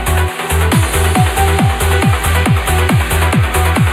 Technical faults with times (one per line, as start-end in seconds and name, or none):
0.00-3.92 channel delay (comb filtering)